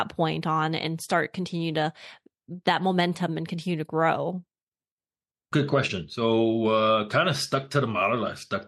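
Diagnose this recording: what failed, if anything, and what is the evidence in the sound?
Nothing in this speech recording suggests that anything went wrong at any stage, so there's nothing to diagnose here.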